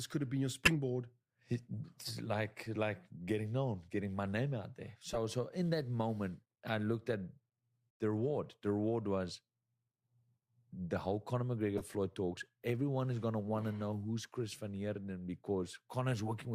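Damaged compressed frames reached the decoder, which played them instead of discarding them, so the speech track carries four corrupt frame decoded events. Misread gains and codes sprayed energy into wrong frequencies for a few frames each time: a loud glitch at 0.65–0.73 s, a softer glitch at 5.13–5.18 s, a faint glitch at 6.66–6.70 s, and a moderately loud glitch at 11.78–11.84 s spanning several frames.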